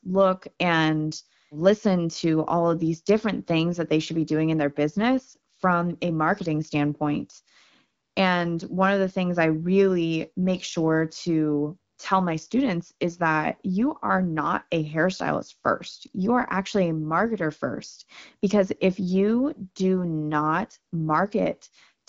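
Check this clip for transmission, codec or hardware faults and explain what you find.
Nothing in the speech points to a transmission, codec or hardware fault. It has the slightly band-limited character of an AMR wideband (HD Voice) link at 12.65 kbit/s, with only light coding texture and the consonants still clear.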